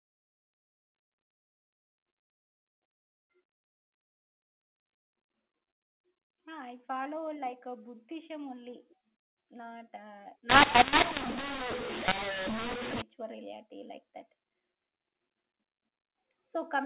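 From 10.50 to 13.02 s the speech turns harsh and gritty, its levels lurching unevenly while the pauses fill with hiss. This is a mu-law and A-law mix-up: telephone audio coded with G.711 mu-law was decoded as A-law, scrambling every sample's level.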